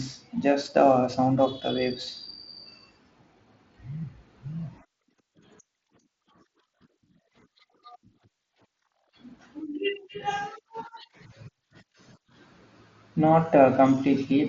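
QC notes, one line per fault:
0.0–1.69 s, sample clock jitter: the opening speech carries a fine hiss and roughness that swells on loud, bright moments, drops away in the pauses, and clears after 1.69 s. The converter clock wanders by something like 7 microseconds, so each sample lands slightly off time. The error this causes grows with how steeply the waveform moves and sits about 30 dB below the signal, inside a headset-codec band that stops near 7.7 kHz.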